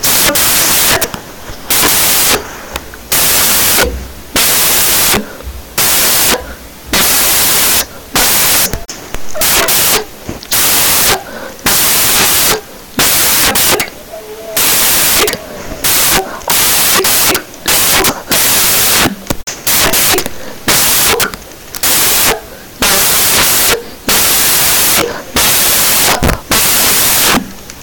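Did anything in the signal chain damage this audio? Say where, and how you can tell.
Yes. From start to finish the speech carries loud, harsh broadband noise. This is a sample-format conversion fault, samples built from the wrong bytes. The reader assembled each sample's bytes wrongly, through a byte offset, swapped order or a mismatched alignment. The rapidly changing low-order bits then became the most significant part of every value, turning fine detail into loud noise.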